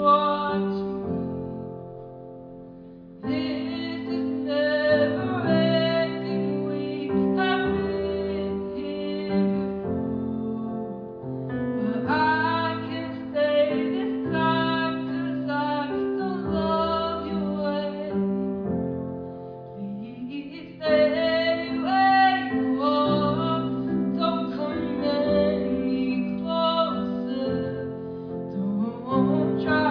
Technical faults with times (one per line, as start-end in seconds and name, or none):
none